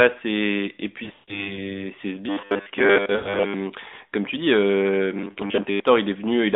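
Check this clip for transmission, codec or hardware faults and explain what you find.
Two kinds of fault are present, each occurring more than once, over a narrowband mobile line.

Lost AMR speech frames occur at 1.04–1.58 s, 3.16–3.40 s and 5.32–5.35 s, the last just after "comme tu dis euh". Frames failed their checks. The decoder stretched old settings with falling gain. The first burst loses about 180 ms, with a 140 ms run that fades out. The others dip briefly, then return rough.

Robotic sound from repeated short buffers occurs at 2.29–3.54 s, ending before "comme tu dis euh", and at 5.15–5.80 s, starting after it. Short chunks are looped while fresh audio is skipped. A rigid 100 Hz buzz results, likely from a 10 ms buffer repeating. Most of the first stretch and about half the second are affected.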